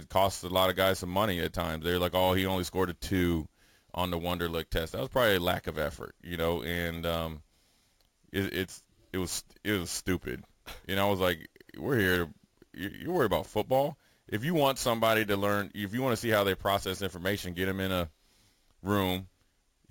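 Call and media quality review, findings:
Bright metallic fizz over the speech throughout, tracking its level, about 18 dB down, filling 8 to 16 kHz. Imaging from sample-and-hold upsampling: 16 kHz audio raised to 44.1 kHz by repeating samples, no anti-imaging filter, so mirrored spectrum copies appear.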